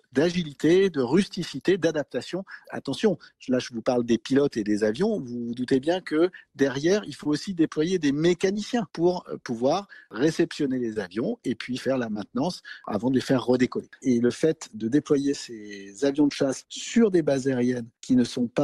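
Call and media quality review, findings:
Short concealed packet loss at 0.31, 7.23, 8.53, 10.93, 12.13, 14.27 and 16.13 s. Brief smear or wobble each time. Receiver jitter buffer/decoder: 20 ms of audio arrived late or never, so the gap was bridged by extrapolating the preceding sound, then crossfaded back.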